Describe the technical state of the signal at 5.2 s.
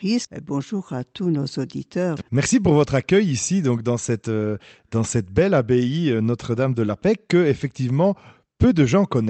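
At 5.2 s the speech is intact, with no dropout, click, distortion or other fault, only the ordinary coding character of the Opus call path it passed through.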